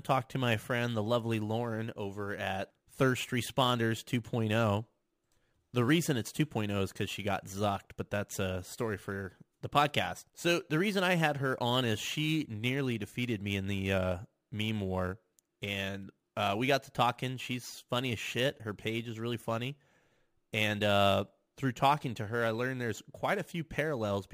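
Imaging from sample-and-hold upsampling runs throughout: the sound points to 24 kHz material, held sample by sample up to 44.1 kHz, so mirrored speech fills 12 to 24 kHz as metallic fizz about 22 dB down.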